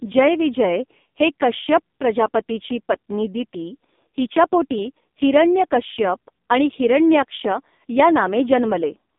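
Throughout, the speech carries heavy AMR narrowband mobile codec damage. Nothing passes above 3.7 kHz or below about 200 Hz, and the sparse pulse-driven vocal-tract model leaves the voice buzzy and synthetic, which fits one of AMR-NB's lowest modes, around 5.15 kbps.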